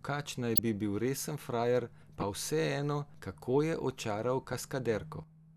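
At 0.56 to 0.59 s and 2.20 to 2.23 s, a corrupt frame was decoded. Damaged bits misplace energy. Each is heard as a chirp, squeak, blip or burst of noise, the first louder.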